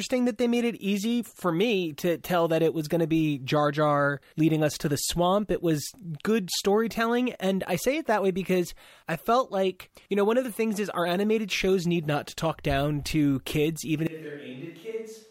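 A switch to a distant microphone comes at 14.07 s and lasts to the end of the clip. The speech turns suddenly roomy and hollow, loses bass, and drops by roughly 10 dB, while background noise rises to around 30 dB below the speech. The likely cause is that the close microphone's feed dropped out or was left out, leaving only a pickup further away that hears more of the room.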